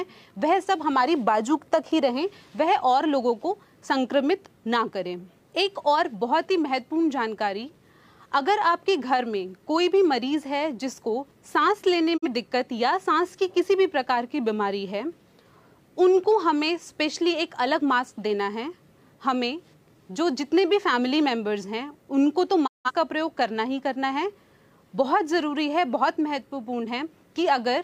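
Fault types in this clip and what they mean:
Digital broadcast dropout: the receiver muted on failed frames, so the sound fades over 20 ms into silence at 12.16 s (42.7 ms lost, fitting one frame) and 22.66 s (170.7 ms, fitting four frames). The waveform flattens to silence, and the spectrogram shows full-height blank gaps.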